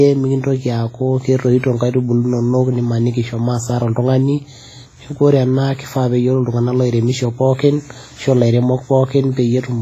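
All the way through, the speech rings and washes with a hiss that breathes along, nothing above 15.4 kHz, likely heavy WMA compression at a low bitrate, perhaps 24 kbps.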